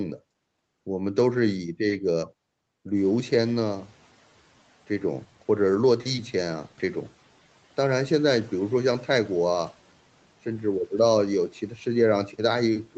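From 2.96 to 4.14 s, the noise suppressor is catching up after the room noise jumps near 3 s. It passes the noise, then lowers it about 6 dB, unlike repeated pumping.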